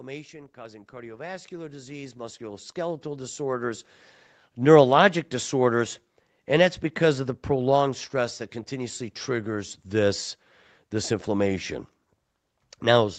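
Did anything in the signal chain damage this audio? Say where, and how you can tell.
Yes: automatic gain rising in call processing from 0.54 to 3.95 s boosts speech and background noise together by about 17 dB. The waveform envelope and the spectrogram noise floor climb steadily.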